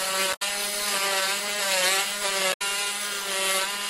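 The audio carries two short bursts of damaged data in a compressed stream, from 0.30 to 0.42 s and from 2.50 to 2.62 s, each lasting about 0.12 s. In both places part of the encoded data was corrupted, so the decoder could not read those frames correctly, lost its frame alignment and had to search forward for a valid header. The result is a brief chirp or blip that briefly replaces the sound before decoding recovers.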